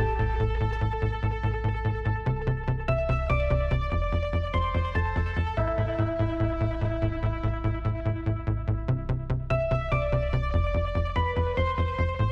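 Nothing stood out as a technical fault on listening.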